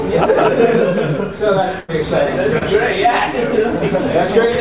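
From 1.80 to 1.90 s, a burst of packet loss removes about 80 ms. The receiver stretches and fades the preceding sound into a held tone or hiss, then resumes past the gap. From 2.58 to 2.63 s, a short concealed packet loss drops about 20 ms. The receiver continues the last sound and blends it back, leaving a brief smear or wobble. The band stops at 4 kHz, which points to a narrowband G.711 call path.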